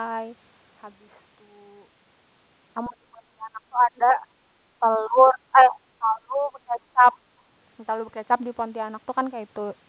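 Speech suppressed in double talk at 2.86 to 4.22 s and 4.8 to 7.06 s: the voice drops by about 25 dB, then about 30 dB, in pieces, likely because an echo canceller mistook it for loudspeaker echo.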